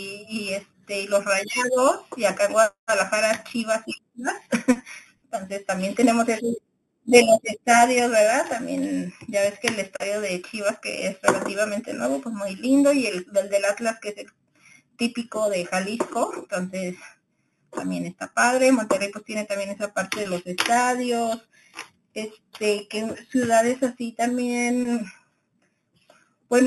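Speech with imaging from sample-and-hold upsampling throughout, which fits a rise from 8 kHz to 44.1 kHz by repeating samples unfiltered. A metallic fizz tracks the voice. On a spectrogram, mirrored speech fills 4–8 kHz at about -14 dB, repeating higher; the waveform shows staircase steps.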